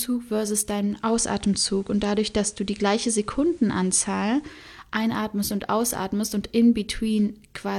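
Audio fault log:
0.85 to 4.70 s, digital radio blending to analogue: over about 0.35 s the speech picks up a faint hiss well below it, and the level shifts by about 2 dB, then it fades back the same way at 4.70 s. The receiver lost its digital signal and cross-faded to the station's FM analogue broadcast, which carries the sound with its background hiss until the digital stream returns.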